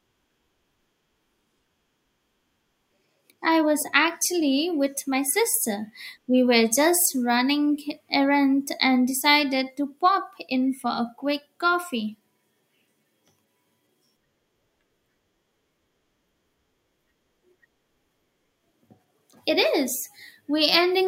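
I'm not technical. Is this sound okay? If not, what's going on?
Yes, nothing in this recording stands out as a technical fault.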